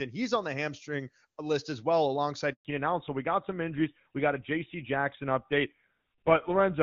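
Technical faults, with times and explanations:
2.53–2.65 s, handover gap: right after "hamstring list as well" the audio stops for 120 ms while the call switches networks and no frames arrive.
2.65 s to end, fallback to narrowband: nothing above 4 kHz remains after the clear HD Voice section, so the sound turns duller and rougher, which fits GSM full rate.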